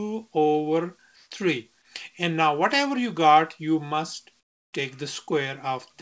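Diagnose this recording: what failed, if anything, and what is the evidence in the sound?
The background gets swapped for comfort noise twice, which points to the call-processing stage, likely discontinuous transmission. From 1.16 to 1.31 s (150 ms) the room tone turns smooth and featureless and comes up about 5 dB. From 4.40 to 4.73 s (330 ms) it drops about 21 dB. The sender's activity detector stopped sending during these quiet spots, where the background sits about 44 dB under the loud parts, and the receiver filled in synthetic noise at the wrong level. The G.722 path has nothing above 8 kHz throughout.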